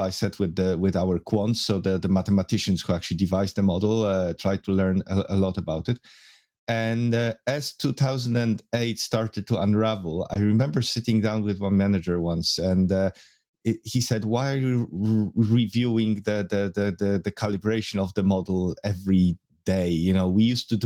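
At 10.33 to 10.37 s the speech has a short concealed packet loss: about 20 ms of audio arrived too late, so the decoder extrapolated the preceding sound and blended back. Unlike a hard dropout, there is no silent gap, only a brief smear.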